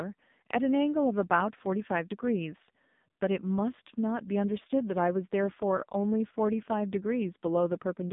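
From start to finish, the speech carries AMR narrowband mobile codec damage, heavy here. Nothing passes above 3.7 kHz, leaving a boxy phone band. The low bitrate, which fits about 5.9 kbps, makes the voice buzzy and synthetic.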